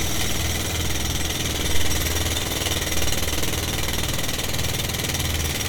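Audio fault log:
Nothing stood out on listening to this audio.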